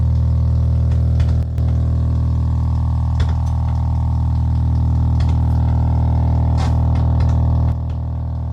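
At 1.43 s the level falls abruptly by about 6 dB, holds there for about 0.16 s, and returns at 1.58 s. The same step down comes again at 7.72 s and lasts to the end. The likely cause is one channel drops out: a stereo side vanishes, and the mono sum loses half its contribution. Unlike a fade or gain change, the drop is instant, and the tone and balance of the sound stay unchanged.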